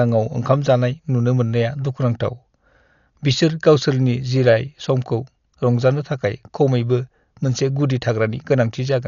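Speech runs the whole way through with heavy codec damage, most likely Dolby Digital compression at a starved rate that points to roughly 48 kbps. The encoder has cut the band so nothing survives above 7 kHz, leaving the sound dull, and many frequency lines carry only dither fill, giving a rough, fluttering noise around voiced tones. A spectrogram would show a flat ceiling at 7 kHz and grainy, speckled energy in place of clean harmonics.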